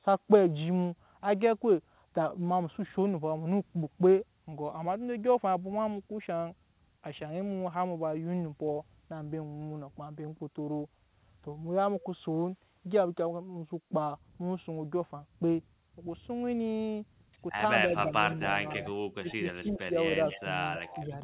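The trouble starts near the end. From 18.33 to 18.39 s the speech dips by about 10 dB. It dips again, more gently, by about 5 dB, from 18.8 to 18.91 s. From 19.2 to 19.42 s it nearly vanishes, falling by about 25 dB. This is speech suppressed in double talk. The likely cause is both sides talking at once. The echo canceller cannot tell the local talker from the loudspeaker return, so it turns everything down.

From 19.29 to 19.71 s a faint second copy of the speech appears, about 20 dB below it and 276 ms late. This is echo leak. The far side is likely on a loudspeaker, and its canceller misses part of what its microphone picks up. That part is sent back. A further suppression dip of about 10 dB follows from 19.62 to 19.96 s.

The echo returns louder, at about 15 dB below the speech, from 20.27 to 20.43 s and from 20.59 to 21.05 s. The delay is again 276 ms. A last shallow dip of about 5 dB runs from 20.99 to 21.11 s. 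Throughout, the call path passes nothing above 4 kHz, which fits a narrowband telephone codec.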